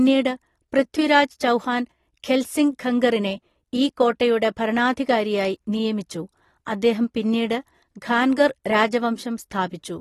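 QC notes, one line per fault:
Throughout, AAC compression: the speech sounds dull and smeared, with a fizzy, warbling edge on sibilants and held sounds, and nothing above 12.4 kHz. The likely cause is low-bitrate AAC-LC coding, fitting about 32 kbps, which cuts the top band and coarsely quantises the rest.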